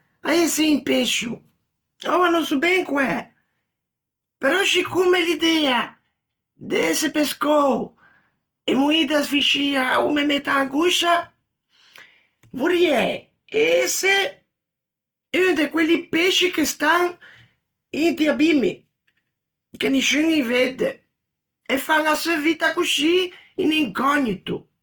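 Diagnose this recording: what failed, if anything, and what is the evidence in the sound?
The codec stage is at fault, with damage plainly audible throughout this speech clip: tones sound rough and grainy rather than swirly, while bandwidth stays full to 20.1 kHz. That points to likely Opus compression in its music mode, noise-filling starved bands at a rate that fits about 24 kbps.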